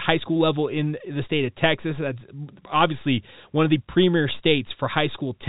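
No faults are audible in this speech recording.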